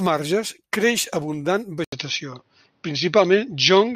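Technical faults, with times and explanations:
1.84–3.95 s, input switched to a poorer device: right after "marges creix abundant" the speech drops out for 80 ms, then returns duller and boxier until the end, with nothing above 6.3 kHz, a level shift of a few decibels and a faint new background hiss well below the voice. The likely cause is that recording moved to a different microphone or a headset call profile, whose narrower band, own tone and own noise replace the original input at that instant.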